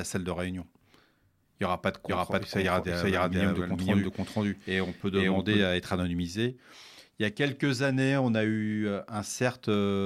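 From 2.08 s to 5.62 s the speech plays twice: a doubled audio track, with a second full-band copy trailing about half a second behind at roughly the same level. It is likely an edit or a slower capture path mixing in an out-of-step duplicate. Unlike an acoustic echo or reverb, the copy has no decay and no room colour, and it cuts in and out abruptly at those two points.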